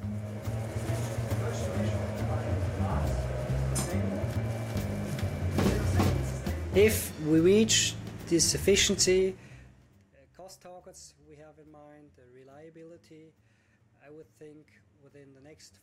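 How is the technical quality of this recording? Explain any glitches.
There's one glitch to flag: zipper noise from 9.02 to 10.20 s. The level drops by about 25 dB, but in unsmoothed jumps of about 2 dB, around fifteen a second. Each jump leaves a tiny click, so a ticking zip rides on the sound as it fades.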